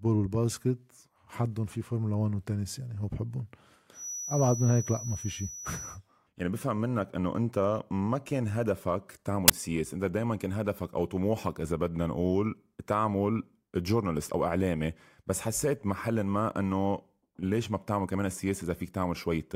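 Feedback whistle, from 3.91 to 6.01 s: a thin, steady tone at 5.9 kHz sits behind the speech, roughly 10 dB below it, swelling and fading slowly in level without building up. The likely cause is a loudspeaker-to-microphone loop running right at its stability limit, so a single high frequency keeps recirculating and sustaining itself but never gains enough to run away into a howl.

Uninitialised buffer, from 9.48 to 9.50 s: a brief, loud burst of harsh digital noise cuts across the speech for 20 ms. A block of that length went out to playback before any audio had been written into it, so whatever stale values were left in that memory were played as if they were samples. The result is a sudden, jarring spike of noise with no relation to the surrounding sound.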